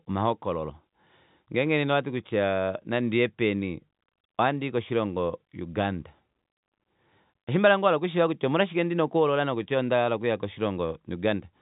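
No technical faults can be heard in this speech clip, which comes through band-limited telephone coding with nothing above about 3.8 kHz.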